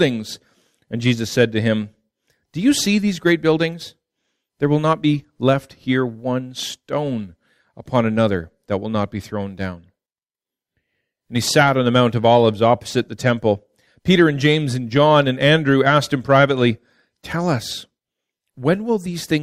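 Nothing is technically wrong with the clip.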